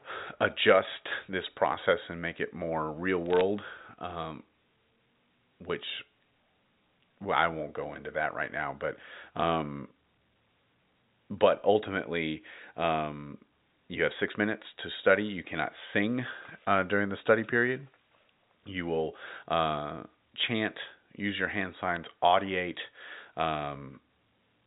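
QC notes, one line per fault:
3.26–3.41 s, bit errors on a digital phone line: after "make it more real", a short burst of sharp ticks as flipped bits corrupt single A-law samples on the 64 kbps G.711 path, at a rate of around 0.3 percent. The waveform shows isolated one-sample spikes, and the spectrogram shows thin vertical lines reaching up to the 4 kHz ceiling.
21.96 s, bit errors on a digital phone line: a brief tick right after "chant use your hand", from flipped bits in 3 frames, around 0.2 percent here. It appears as needle spikes in the waveform and narrow broadband stripes below 4 kHz on the spectrogram.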